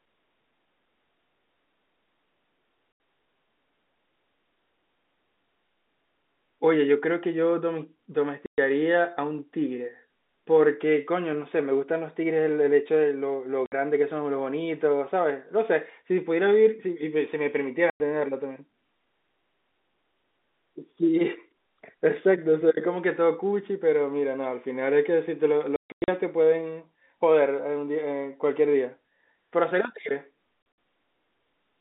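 Speech over a phone-band line, chopped by packet loss filled with silence: hard-edged dropouts at 2.92 s, 8.46 s, 13.66 s and 17.9 s (60 to 120 ms), then scattered bursts across 25.76 to 26.08 s and 30.62 to 30.78 s. Every gap is a multiple of 20 ms, which fits 20 ms packets.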